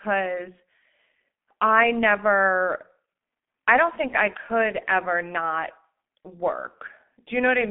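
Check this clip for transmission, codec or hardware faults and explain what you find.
One fault runs through the whole clip: G.723.1 codec damage. Nothing above 3.7 kHz survives, and the band sits near 200 Hz to 3.5 kHz. The coarse frame-by-frame voice model points to a low-rate stream near 6.3 kbit/s. Speech sounds muffled and hoarse, with smeared consonants.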